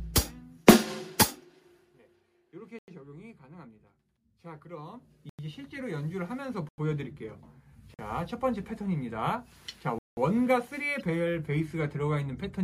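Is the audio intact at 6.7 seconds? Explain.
No. From 6.69 to 6.78 s there is a block of digital silence lasting about 93 ms, which fits a 4096-sample buffer left empty. Either the output buffer was not filled in time or a calculation produced invalid values, so silence replaced the audio. The sound cuts out and returns abruptly with no fade, heard as a short hole. On a waveform it shows as a flat line; on a spectrogram, a blank vertical band across all frequencies.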